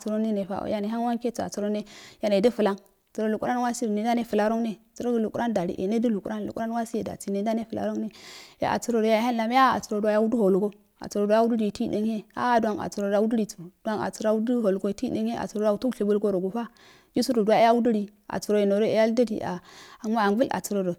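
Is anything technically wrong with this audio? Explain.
No, nothing technically wrong stands out here; it's just speech, with no glitches or defects to point to anywhere along the way.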